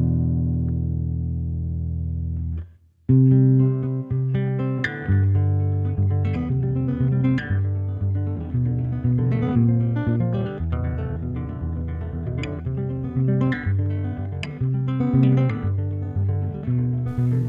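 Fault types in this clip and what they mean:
Time-stretched section: from 5.83 s onward the sound runs 1.95 times faster, rushed, but pitch stays put, unlike sped-up playback; likely stretching software.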